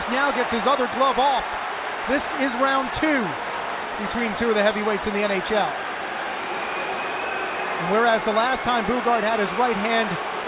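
No technical faults can be heard anywhere in the clip. There is nothing in the signal that calls for a time or a value to be noted.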